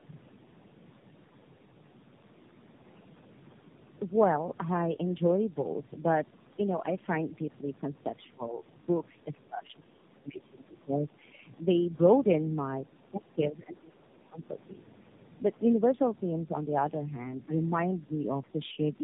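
Speech, carried through tandem speech coding for its whole length. The sound is rough, muffled and warbly. It has nothing above 3.8 kHz. The roughness points to about three low-rate speech codecs in a row, such as G.729A and AMR-NB, decoded and re-coded at each link. Each coder works on the damage left by the one before, so the artefacts pile up. Between 12.89 and 14.38 s, the speech is suppressed in double talk. The voice dips, for about a second in all. The deepest drops reach some 25 dB. The likely cause is an echo canceller that heard both sides at once. It could not tell this talker from loudspeaker echo, so it turned the signal down.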